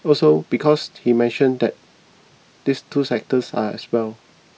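No audible technical faults turn up anywhere in the speech recording, so there is nothing to log.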